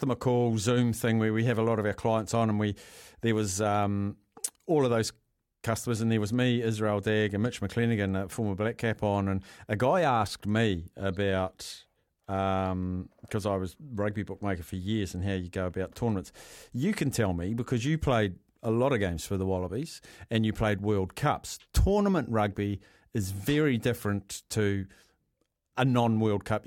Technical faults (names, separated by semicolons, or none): none